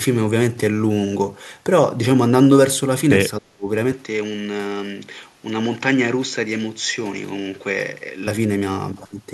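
From 3.39 to 3.67 s the speech drops out hard, sinking by something like 35 dB for about a third of a second. That's speech suppressed in double talk: likely the echo canceller hearing both sides at once and turning everything down rather than risk echo.

Then at 3.92 s the tone changes with no gap at the switch. The level falls a few dB, and a new noise floor sits roughly 35 dB under the speech. It stays that way until 8.27 s. That pattern fits the input switched to a poorer device, likely a narrower-band microphone or headset taking over the recording.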